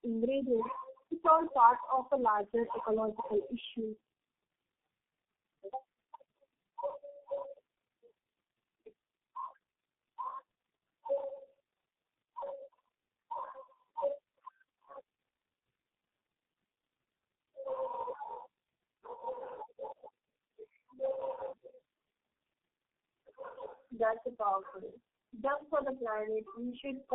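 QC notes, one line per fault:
Throughout: tandem speech coding. The speech passed through several low-rate speech coders in a row, decoded and re-encoded at each link. The character fits four such coders, ending with a G.723.1-type coder near 6.3 kbit/s. Each coder models an already damaged signal, so errors pile up. The result is rough, muffled and warbly, worse than any single link. Nothing is heard above 3.8 kHz, which fits narrowband telephone coding.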